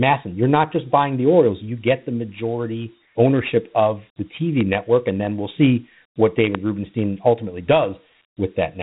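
From the start the speech has that gritty, hissy edge of Dialogic VOX ADPCM. At 4 bits a sample the step-size coding can't track the waveform cleanly, and nothing gets through above about 3.9 kHz, which fits 8,000 samples a second at 32 kbps.

Then there's a loud pop from 4.61 to 4.63 s, right after "majority ownership of the" and before "network and then we'll", and another at 6.55 to 6.57 s after "then we'll see what". Each is a single sharp crack sitting roughly 15 dB above the speech, which carries on underneath. That's most likely a voltage spike from a plug, a switch or static getting into the chain.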